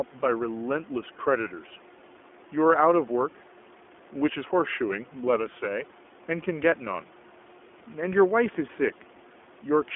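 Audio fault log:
throughout, iLBC codec: The speech has passed through the iLBC narrowband coder, which codes each 20 ms frame's excitation on its own without drawing on the previous frame. The 20 ms frames point to its higher-rate mode, around 15 kbps. The line band runs from 250 Hz to 3.4 kHz, and nothing above 3.7 kHz survives. The result is muffled, telephone-like speech with a plainly audible rough, synthetic edge. The faint room noise, about 25 dB below the speech, comes through the same coding.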